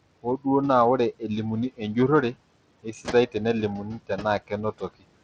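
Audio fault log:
Throughout, noise suppressor artifacts: The steady room noise, which sits about 17 dB below the speech, is pulled down by about 22 dB in the gaps and comes back up under the speech, so the background pumps in and out with each phrase.
Throughout, Bluetooth SBC compression: The treble flickers and drops in and out, and a gritty, grainy texture with some aliasing rides on the speech. This is plainly audible codec damage, and it is likely from SBC running at a modest bitrate, around 80 kbps. At that rate the weak upper sub-bands get few or no bits, and the remaining bands are coarsely quantised. Above this, the call microphone processing's band limit leaves nothing beyond 8 kHz.
0.23–0.46 s, 2.83–3.35 s, 3.84–4.52 s, 4.72–5.05 s, speech cut by the noise suppressor: In each span the suppressor mistakes parts of the speech for background and turns them down along with the noise. 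The deepest dips are about 18, 17, 21 and 21 dB. Only short stretches within each span are hit, from roughly a tenth of a second to about a fifth of a second. The first lands just before "naa ore", and in all four the affected parts sound swallowed or faint.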